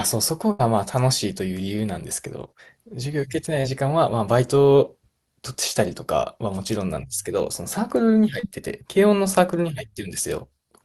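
Burst of packet loss, 0.51 to 0.61 s: a run of call packets arrived too late or not at all. The receiver stretched the last sound for about 77 ms while fading it, then resumed with roughly 80 ms of speech gone.

Short concealed packet loss, 3.61 to 3.65 s and 8.39 to 8.45 s: briefer gaps of about 20 and 40 ms were patched by extrapolating the preceding sound and crossfading back, heard as a quick smear or wobble over speech that tops out near 12 kHz from the Opus call codec.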